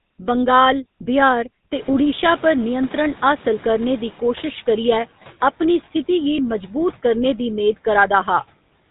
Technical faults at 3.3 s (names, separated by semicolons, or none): GSM full-rate codec; noise suppressor catching up